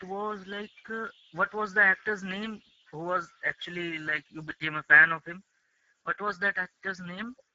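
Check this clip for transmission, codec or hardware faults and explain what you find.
One fault runs through the whole clip: Speex codec compression at a low quality setting, consistent with a bitrate near 10 kbps. Starved of bits for the excitation, the speech sounds plainly noisy and hoarse, the band above 4 kHz is only noise-like fill, and nothing reaches past 7.7 kHz.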